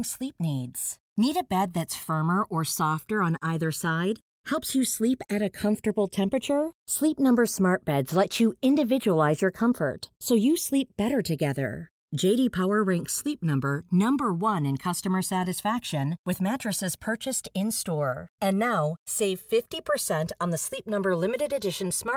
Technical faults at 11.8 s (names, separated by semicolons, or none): channels drifting apart